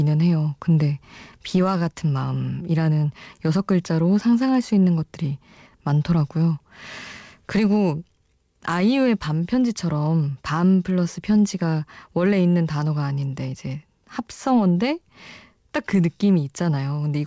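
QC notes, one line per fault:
throughout: clock drift between sender and receiver. The sending side's clock runs roughly 3% slow relative to the receiver, so the jitter buffer keeps draining rather than filling. Unlike packet loss or network jitter, the disturbance never jumps randomly. It is a persistent one-directional mismatch that forces constant compensation, heard over a band-limited call path with nothing above 8 kHz, which fits G.722 at 64 kbps.
0.24–17.0 s: repeated timing corrections. To keep the draining buffer from running dry, the receiver repeatedly duplicates short slices of the sound. These stretch the passage to about 97% of its pace and add roughly 0.4 s in total. Each insertion is tiny and unevenly spaced. What separates this from jitter-driven time-warping is that every correction lengthens the sound and none shortens it.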